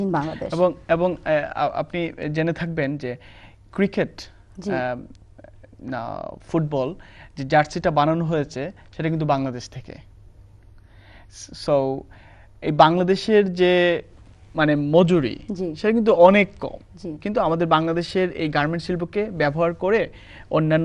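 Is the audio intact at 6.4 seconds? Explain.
Yes, at 6.4 seconds the audio is intact, with no dropout, click, distortion or other disruption at that point.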